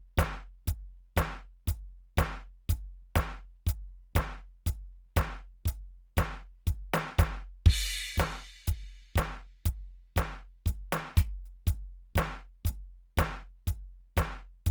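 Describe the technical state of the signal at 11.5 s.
At 11.5 s the music carries the grainy, rough texture of low-rate compression, likely Opus compression, present throughout the clip. The encoder fills starved bands with folded or noise-like content rather than leaving holes, so tones turn noisy instead of swirling like MP3. Bandwidth stays full, near 20.1 kHz, consistent with a rate around 24 kbps.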